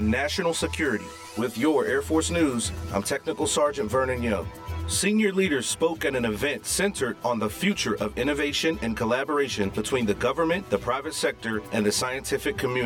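Throughout the audio there is channel delay causing comb filtering. One channel lags the other by around 10 ms, and summing to mono cancels their shared content at evenly spaced frequencies, starting near 50 Hz. The result is a hollow, phasey colour across the whole clip.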